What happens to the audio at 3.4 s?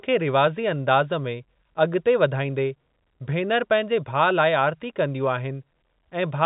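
Nothing goes wrong at 3.4 s: the speech continues intact through that moment, carrying only the steady telephone-band character of G.711 coding, with nothing heard above about 3.8 kHz.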